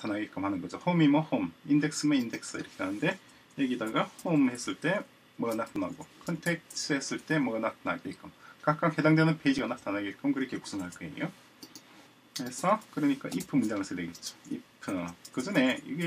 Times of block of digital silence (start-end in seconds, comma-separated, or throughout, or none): 5.76, 9.58